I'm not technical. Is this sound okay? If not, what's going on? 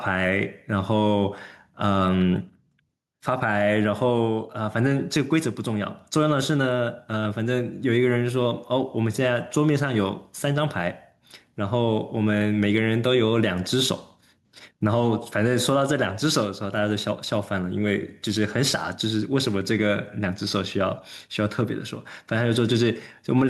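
No. Throughout the clip there is gain pumping: the loud and soft parts of the speech end up closer in level, and the sound is squashed. The likely cause is a microphone level set far too high, with automatic limiting constantly pulling it down.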